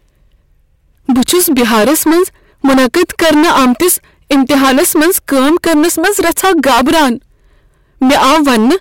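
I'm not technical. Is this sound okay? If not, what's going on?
No. The speech was fed in far louder than the recording could hold, so hard clipping chops off nearly a third of it, giving harsh fuzz on every loud sound throughout.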